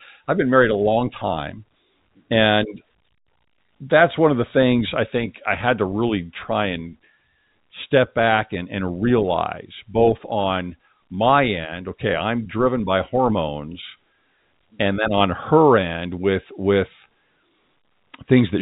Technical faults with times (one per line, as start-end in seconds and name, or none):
2.58-2.64 bit errors on a digital phone line
5.28-5.34 bit errors on a digital phone line